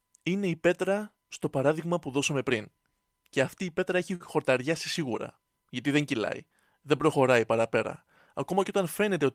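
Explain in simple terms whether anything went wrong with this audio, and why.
At about 4.15 to 4.23 seconds there is a short stall from a late packet. One piece of the speech arrived late, so the player briefly ran out of sound and stretched the last bit for about 46 ms, giving a held moment with a slight buzz or dip. Unlike a lost packet, nothing is skipped: once the late piece arrives, the speech carries on from the same place, just about 46 ms later than before.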